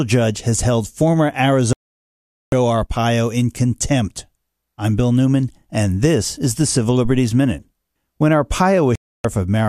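Just after "judge has held former", at 1.73 s, the speech cuts abruptly to silence and stays muted until 2.53 s, a hole of about 0.79 s. A second, shorter hole runs from 8.95 s to 9.25 s, about 0.29 s. Both are a digital broadcast dropout: the receiver stopped getting usable frames, through signal loss or failed checksums, and muted until clean frames arrived. The gap lengths fit roughly 33 and 12 lost frames, and whatever was transmitted during them is gone.

Between those holes, from 7.05 s to 7.27 s, a deep, dull thump occurs and dies away quickly, decaying over about 49 ms. This is a phantom power thump. A supply was switched on or off on a live input, and the sudden voltage step passed through the coupling capacitors as a low-frequency pulse before settling.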